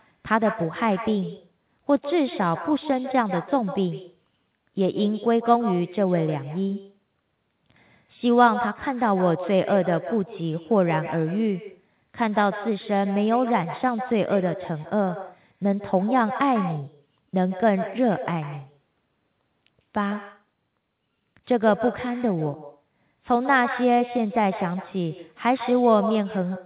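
Speech, heard through a narrowband call path that stops at 4 kHz, which fits a G.711-style telephone codec. Throughout, there is echo with no canceller. A thinner copy trails every phrase by roughly 150 ms, about 12 dB quieter. The far end's loudspeaker is being picked up by its microphone and sent back.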